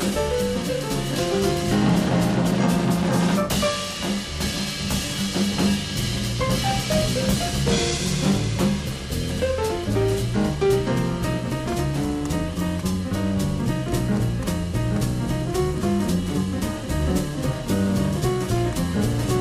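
From start to finish there's periodic clock jitter: something is wobbling the converter's sample clock at around 1 kHz, so every component picks up sidebands roughly that far above and below it, worse on higher frequencies. It comes across as a rough, metallic edge that disappears when the audio goes quiet.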